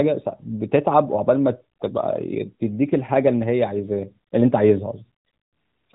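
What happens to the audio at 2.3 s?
At 2.3 s the speech carries on intact, with no dropout, click or other fault at that moment.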